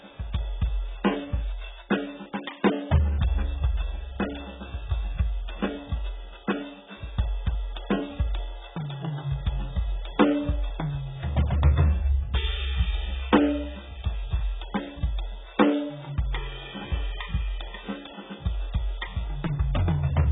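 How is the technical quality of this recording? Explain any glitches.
Poor. The music is heavily degraded throughout by what is likely AAC compression. Nothing remains above 3.8 kHz, fitting a very low bitrate near 8 kbps. The sound is dull and smeared, with warbling, fizzy sustains.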